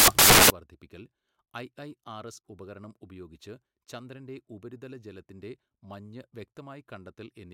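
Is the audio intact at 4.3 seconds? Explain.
Yes, the speech at 4.3 seconds plays through intact, with no dropout, click, distortion or other fault at that moment.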